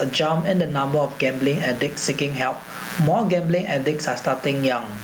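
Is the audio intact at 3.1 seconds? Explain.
No. At 3.1 s, as throughout the clip, a mains buzz sits about 25 dB below the speech. Sharp switching spikes at twice the 60 Hz mains rate spread harmonics up into the kilohertz range. The result is a raspy, edged buzz rather than a smooth low hum, which is what separates it from plain mains hum.

The level also pumps through the whole clip, over a swing of around 20 dB, so the speech sounds squashed. This is likely a gain set far too high with a fast limiter clamping it down. The pumping follows the loudness of the speech, which sets it apart from steady room noise. That room noise sits about 34 dB below the speech and is part of the recording itself.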